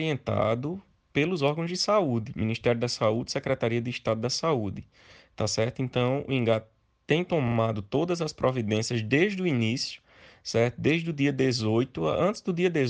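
A short block of compressed audio frames was sent twice more than intended, a repeated-frames fault, so the decoder replays the same 42.7 ms chunk twice between 7.47 and 7.55 s. The result is a brief stutter that stretches the audio by 85.3 ms.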